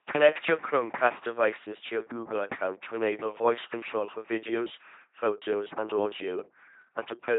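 Throughout, the speech carries LPC-10 vocoder damage, consistent with a 2.4 kbit/s vocoder: a buzzing, robotic pulse-or-hiss excitation, and nothing above 3.8 kHz.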